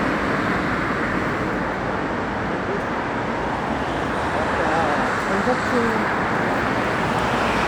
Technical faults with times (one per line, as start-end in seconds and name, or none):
none